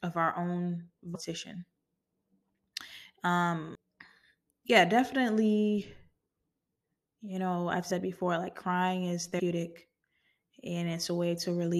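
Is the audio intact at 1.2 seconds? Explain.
No. Just after "of our own", at 1.14 s, compressed frames are skipped: about ten 23.2 ms frames never play, so the audio leaps ahead roughly a fifth of a second. Rather than a dropout's silent gap, the join is a brief smeared blip if the frames are lossy, or a hard click if they are lossless.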